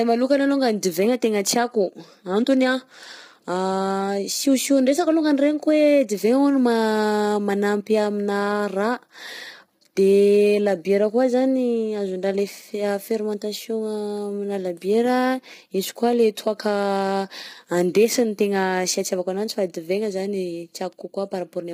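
From start to end, the speech sounds rough and grainy. Noise fills the gaps between harmonics, and the top band sounds lowered or synthetic. This is likely low-delay AAC compression, AAC-ELD, at a bitrate near 24 kbps. Its short frames resolve pitch harmonics poorly.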